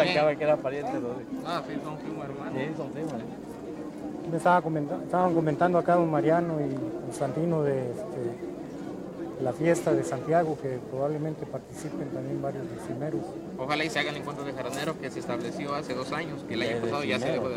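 Nothing in the recording stood out as a technical problem on listening.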